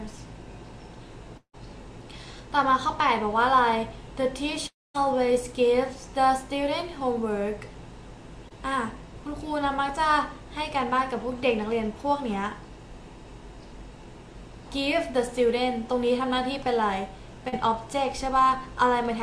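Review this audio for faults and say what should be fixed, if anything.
At 1.37–1.55 s and 4.67–4.96 s the audio fades into a decaying buzz, then silence, then resumes with content missing. This is likely a long network dropout of about 160 ms and 280 ms.

Short concealed packet loss occurs at 8.49–8.52 s and 17.48–17.54 s. About 20 ms and 40 ms never arrived and were synthesised, leaving brief smears.

Fix both by improving network stability and adding forward error correction or a larger jitter buffer.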